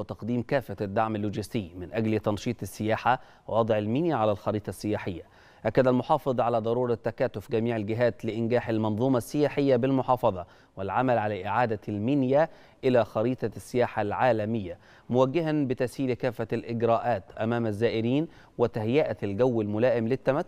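A single soft, low thump lands at 19.41 s, near the very end of the sound, while the material itself carries on unchanged across it. It is a DC step: the waveform's zero line abruptly jumps by a small offset, about -42 dBFS, as happens when a converter recalibrates or an input carrying an offset gets switched in. The offset then bleeds away rather than holding, decaying in the manner of a 20 Hz high-pass filter.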